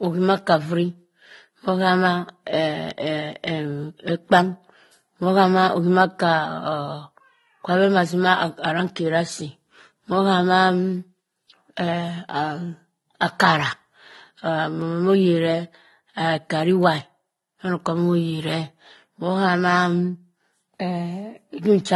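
Speech that has likely passed through one lossy codec and then another, a transcoding between lossy codecs heard throughout, consistent with a mid-rate Vorbis stage feeding a low-rate AAC-LC stage. The second encoder spends its scarce bits re-coding the first one's artefacts, so the two layers of smearing and swirl sit together over a dulled top end.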